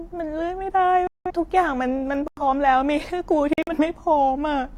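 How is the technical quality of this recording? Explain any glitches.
The speech has three abrupt silent gaps. Each is a corrupt frame muted: damaged compressed frames were rejected by the decoder and replaced with silence. Holes run 1.07–1.31 s, 2.28–2.43 s and 3.53–3.73 s. Timing stays intact.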